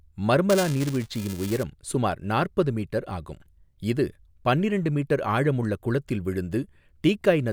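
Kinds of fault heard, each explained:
Buffer tearing: the ring buffer's writer and hardware reader have slipped and cross each period, splicing a small sliver of audio one lap old into every buffer. From 0.49 to 1.63 s, before "சுமார் நாற்பது மீட்டர் ஆகும்", the speech carries a 375 Hz robotic buzz, fitting a 128-sample buffer.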